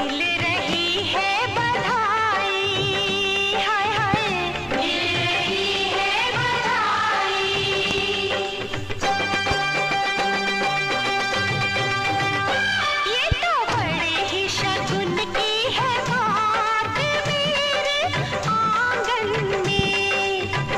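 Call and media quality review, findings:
Loud pop, single at 0.73–0.75, 4.14–4.16, 13.32–13.34, 19.79–19.82 s; double at 7.91–8.00, 9.34–9.54 s. About 15 dB over the sound. Likely plug, switch or driver voltage step.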